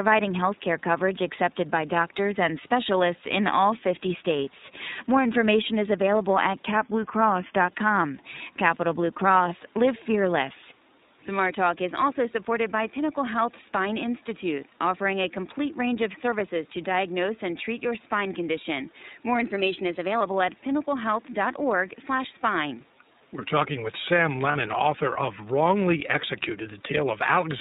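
The iLBC codec colours the whole recording: nothing above 4 kHz survives, and the speech sounds plainly rough and synthetic, consistent with its 30 ms-frame, 13.33 kbps mode.

From 6.66 to 7.68 s, right after "information is available at", speed and pitch drop together, by about 6% and roughly a semitone (109 cents). From 19.40 to 20.21 s the opposite happens, an equal speed-up with pitch rising about 103 cents. The likely cause is a gross drift correction step that resets the playback rate.

At 24.52 to 24.56 s, just before "author of", lost iLBC frames leave a short buzzy, held-vowel fill that matches one 30 ms concealed frame. The speech recovers immediately afterwards.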